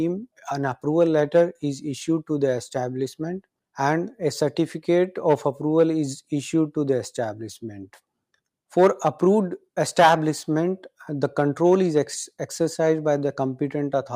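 No technical faults can be heard, so there is nothing to describe in time order.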